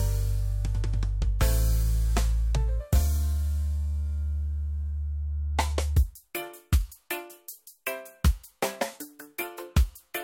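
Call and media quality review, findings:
No audible faults found in this recording.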